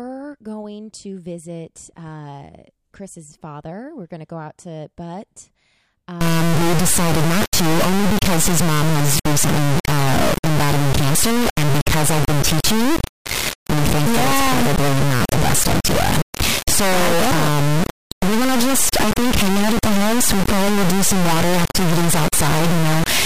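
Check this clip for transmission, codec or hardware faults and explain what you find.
One fault, an integer read as float, runs from 6.21 s to the end. Integer samples are decoded as floating-point, pointing to 32-bit integers read as 32-bit floats, so values land near zero or far beyond full scale. The speech turns into an extremely loud, buzzing square wave, falling silent in the quietest passages.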